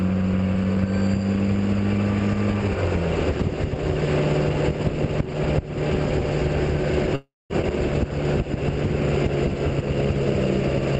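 Call audio that, from 7.15 to 7.53 s, briefly continues its last sound as a fading buzz or hiss and then goes silent for about 210 ms. This call audio freeze is likely the jitter buffer running dry while packets were held up, inserting a gap of about 0.34 s without losing anything. At 7.62 s the audio skips ahead, jumping forward almost seamlessly past roughly a fifth of a second of sound, dropped in transit or by the buffer catching up. Throughout, the highs stop at 8 kHz with coding noise, which fits an Opus call path at around 20 kbps.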